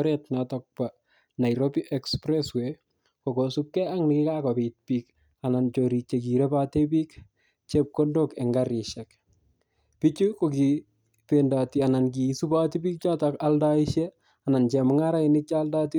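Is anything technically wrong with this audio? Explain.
No, nothing in this speech recording stood out as a technical problem on listening.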